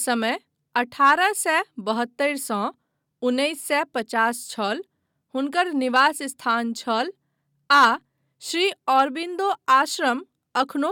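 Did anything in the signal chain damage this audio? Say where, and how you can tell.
No, nothing audible in this speech recording points to damage at any stage of the signal chain.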